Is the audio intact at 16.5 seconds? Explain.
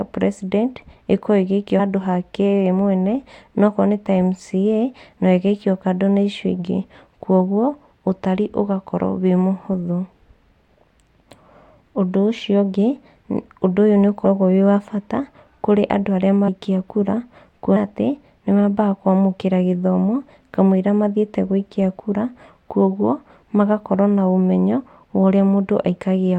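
No. At 16.47 s the decoder fails to play a short run of compressed frames, either because they never arrived in the file or because it rejected them as damaged, so they are skipped outright. Roughly a tenth of a second of the speech is lost, which points to around five frames going missing. At the splice the speech jumps abruptly forward.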